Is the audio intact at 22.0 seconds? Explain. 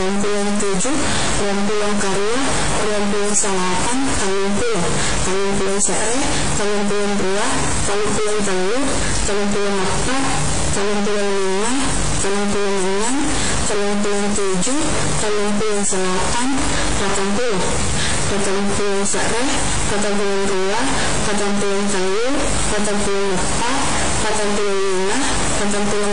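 No. Low bit depth without dither runs through the whole clip, including 22.0 s: the grainy, signal-following distortion sits nearly as loud as the speech, which fits likely truncation to about 3 bits. WMA compression also affects the entire clip, with a washy, ringing hiss that breathes with the speech and nothing above 10.1 kHz, consistent with a low bitrate around 32 kbps.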